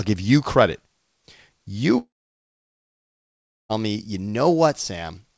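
In this speech clip, the likely cause is a long network dropout: from 1.98 s to 3.71 s no packets reached the receiver, so about 1.7 s of audio was never played. The receiver briefly stretched the last sound into a fading buzz, and for roughly 1.6 s only silence remains before the speech resumes at "me you", with the lost stretch simply gone. The call codec also cuts the band, with nothing above 8 kHz, which fits G.722.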